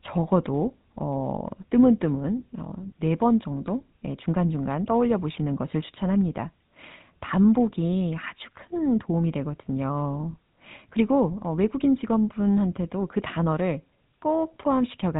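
The speech was carried through the GSM full-rate codec for the whole clip. It rebuilds the voice from a vocal-tract model driven by sparse pulses at around 13 kbps, giving a plainly buzzy, gravelly roughness and nothing above 3.8 kHz.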